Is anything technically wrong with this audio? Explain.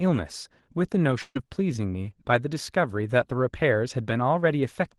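Yes. Burst of packet loss at 1.21 to 1.37 s: about 140 ms of audio arrived too late or not at all, so the receiver stretched the last sound for 138 ms while fading it, giving a held buzz or hiss and 30 ms of silence. Then the speech resumes further on, with that stretch missing.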